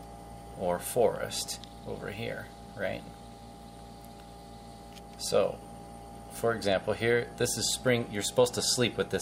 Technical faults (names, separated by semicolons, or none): USB whine